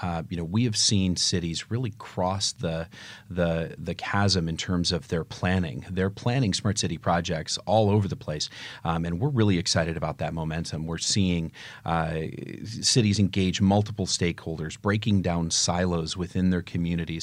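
Nothing in this speech recording stands out as a technical problem at any point.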